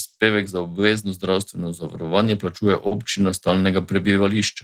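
A short speech recording carries a steady clock drift between sender and receiver: the sending clock runs about 4 percent slow, so the receiver's jitter buffer keeps draining and timing hiccups recur unevenly across the whole clip. Unlike a single network glitch, this never settles. From 1.31 to 4.13 s, repeated timing corrections stretch the audio to about 97 percent speed, adding about a tenth of a second in total. Each repeated slice is small, and all go the same direction, giving a slightly dragging, unsteady tempo rather than one audible break. Two short stalls from a late packet sit at 0.07 to 0.16 s and 2.87 to 2.94 s. There the buffer ran empty and the last sound was held for 60 ms and then 40 ms before playback resumed from the same point. Nothing is lost, which separates these holds from dropouts.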